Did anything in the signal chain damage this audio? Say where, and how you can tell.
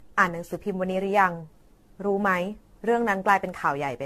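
Yes, at the codec stage, throughout the speech: generation loss, likely from around fifteen repeated lossy encodes. Nothing reaches above 14 kHz, which fits 64 kbit/s AAC. Unlike a single low-bitrate pass, it sounds swirly, hollow and smeared with blurred attacks as each re-encode stacks fresh quantisation.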